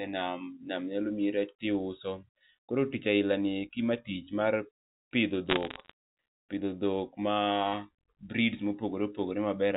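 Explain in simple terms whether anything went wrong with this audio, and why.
Between 5.49 and 5.91 s the speech picks up a burst of sharp ticks and crackle: bit errors on a digital phone line. A small fraction of the transmitted bits were flipped, each one corrupting a single sample. Unlike a dropout, the speech itself never cuts out.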